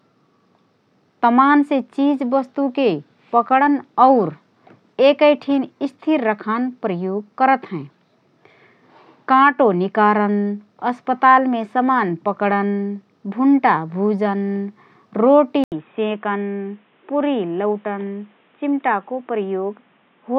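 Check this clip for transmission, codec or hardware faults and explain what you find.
One fault is present. At 15.64 s the speech drops out for about 80 ms, then continues to the end sounding narrower, boxier and a few decibels quieter, over a faint new background noise. The likely cause is an input switched to a poorer device, such as a headset's call profile, whose microphone passes nothing above 3.8 kHz. A spectrogram shows a brief vertical gap, then a flat ceiling at 3.8 kHz; the waveform's envelope shrinks slightly after the gap.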